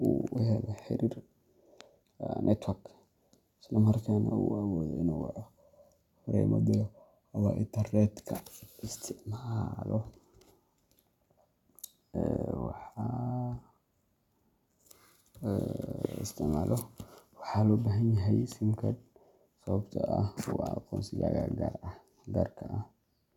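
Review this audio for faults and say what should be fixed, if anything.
A single loud pop sits on the speech from 16.05 to 16.07 s, peaking roughly 15 dB above the surrounding signal, with the speech continuing underneath. The short duration and the abrupt onset point to a sudden voltage step or pulse entering the chain, likely from a connector being disturbed, a switch, a static discharge or a driver glitch. Later stages then shaped that pulse into a brief thump. The fix is to edit out or repair that 20 ms region, for example with a click-repair tool or by redrawing the waveform. To prevent it, secure all connectors and avoid switching or touching gear while recording.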